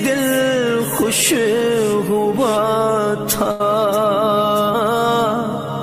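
A burst of packet loss interrupts the audio from 3.51 to 3.62 s. Roughly 80 ms of the signal never arrived, and the receiver filled the gap by repeating and gradually attenuating the last sound it had. This produces a held, decaying smear before the audio jumps ahead with that stretch missing. On a spectrogram the gap shows as frozen, fading horizontal bands followed by an abrupt restart. In the waveform it looks like a repetitive, shrinking pattern.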